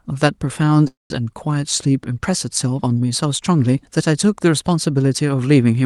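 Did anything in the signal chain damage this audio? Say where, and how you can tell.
Yes, a call audio freeze at the network and jitter buffer stage, likely from packets held up in transit. From 0.87 s to 1.26 s the last sound stretches into a fading buzz for 227 ms, then 160 ms of silence. Nothing is lost; the audio resumes 227 ms late.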